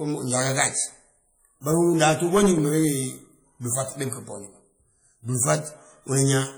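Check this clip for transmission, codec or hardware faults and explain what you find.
One codec fault runs through the whole speech clip: heavy WMA compression damage, likely from a low-bitrate WMA encode consistent with about 32 kbps. Long transform blocks smear quantisation noise across tens of milliseconds and zero weak spectral lines, so the speech rings and sounds washy, with hiss that swells and fades with it. Content still reaches about 20.1 kHz, so this is coarse quantisation, not a lowpass dulling.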